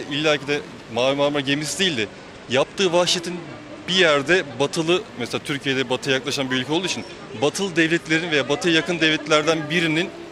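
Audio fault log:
1.40–4.87 s and 6.73–9.41 s, Bluetooth SBC bit pool drop: the treble turns dull and a gritty grain rises in both spans before clarity returns. The sound points to the link throttling the SBC bit pool from 28 to 13, about 102 kbps, starving the upper sub-bands and quantising the rest coarsely.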